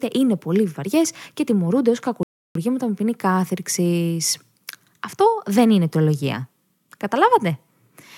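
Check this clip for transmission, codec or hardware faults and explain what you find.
One fault stands out: a rebuffering stall. From 2.23 to 2.55 s, just after "βαριέ και τιμωρούνται ω", the speech drops to silence. The player ran out of downloaded audio and waited for more. Playback then resumes exactly where it stopped, at "με ποινή κάθριξη". Nothing is lost. About 0.32 s of dead air is added.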